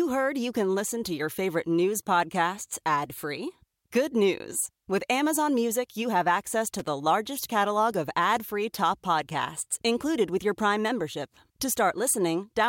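At about 6.79 s, right after "you have access" and before "largest catalog of ad", the speech is broken by loose connector crackle lasting roughly 90 ms, to 6.88 s. A worn or dirty contact in the signal path is momentarily losing and regaining connection, so the audio is chopped on and off in quick, uneven succession, with small pops where any DC offset jumps. The result is a short, scratchy burst of irregular crackle.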